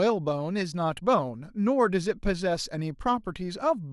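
At 3.27 s the speech is hit by DAB burbling: weak reception lets bit errors slip past error correction into the MP2 data, corrupting sub-band samples and scale factors, which fits a bit error rate around a tenth of a percent. It sounds like a brief blip of noise.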